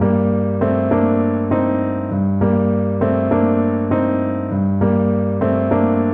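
Periodic clock jitter runs through the whole clip: interference is shaking the converter's sampling clock at around 1 kHz, so every component of the sound gains sidebands that far above and below it, strongest at higher frequencies. It sounds like a rough, metallic edge that disappears in silence.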